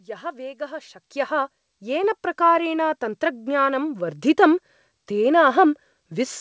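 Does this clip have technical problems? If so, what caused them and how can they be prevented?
Yes. At 1.02 s, right after "यः वेगः", the speech and the room noise behind it jump up together by about 10 dB in a single step, and stay at the louder level. This is a microphone volume step-up: the call software judged the input too quiet and raised the device's input volume at once instead of ramping it. The absence of anything above 8 kHz, which fits a wideband call codec such as G.722, is normal for this call path. To prevent the jump, turn off automatic microphone level adjustment and set the input volume correctly before the call.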